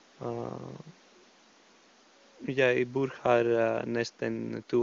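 No faults; speech sits about 31 dB above the room noise floor, and the band tops out near 7.4 kHz, which fits AMR-WB HD Voice coding at its top rate of around 23.85 kbit/s.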